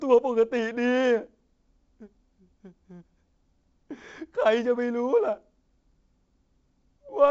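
The speech sits within a G.722 wideband telephone channel, which sounds like the 56 kbit/s mode, with content reaching up to about 7.8 kHz and only the light coding texture that this path leaves behind.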